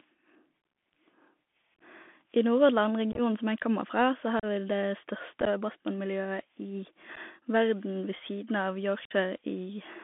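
Bluetooth CVSD headset codec, throughout: the audio is squeezed through a one-bit adaptive delta link, which fits 64 kbps CVSD. It is confined to about 200 Hz–3.5 kHz, with scratchy sibilants and a granular hiss beneath the speech.

Unconcealed Bluetooth headset packet loss occurs at 1.75–1.81 s, 3.12–3.20 s (just before "som jeg kommer"), 4.40–4.46 s, 5.40–5.48 s, 7.16 s (just before "verden ved") and 9.05–9.12 s. Dropped headset packets were replaced by silence or an idle pattern, removing 11 to 49 ms per event as abrupt holes that break the speech into a chopped crackle.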